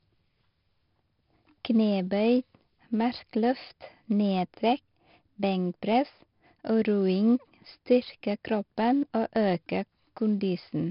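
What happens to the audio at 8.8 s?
At 8.8 s the speech is still passing through 4-bit ADPCM compression, which runs through the whole clip. Each sample is coded as a coarse 4-bit step from a predicted value, and the step size lags on fast changes, leaving heavy gritty hiss that rides on every loud syllable and roughens sharp onsets. Nothing above about 5.3 kHz survives, which fits a low sample rate near 11 kHz and leaves the speech dull and muffled.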